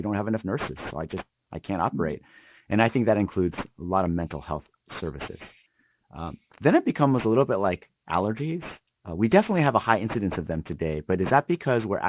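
Aliasing runs through the whole speech recording. Energy above 4 kHz was folded back below that line instead of being filtered out, which fits a drop from a 48 kHz rate to 8 kHz with no anti-alias filter. The fricatives and sibilants come out gritty and metallic, with mirrored tones sitting roughly 20 dB under the speech. A spectrogram shows energy packed hard against the 4 kHz ceiling and faint inverted traces of the upper harmonics.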